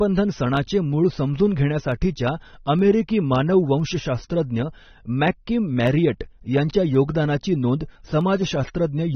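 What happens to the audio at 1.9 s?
At 1.92 s a handful of samples most likely went missing from the stream, a tiny fraction of a millisecond's worth. The waveform jumps straight from one value to a later one instead of passing smoothly between them. Far too little audio is lost for any sound to be cut short, but the sudden step is heard as one sharp click, which shows on a spectrogram as a thin vertical line running up the whole spectrum.

Underneath that click, as everywhere in the clip, the speech carries AAC compression damage. The encoder is likely AAC-LC starved of bits, and the sound points to a low bitrate of around 24 kbps. To save data it lowers its cut-off, discarding the top of the spectrum, and quantises the remaining bands coarsely. The result is plainly audible. The speech sounds dull and smeared, with a warbling, fizzy texture on sustained sounds and sibilants.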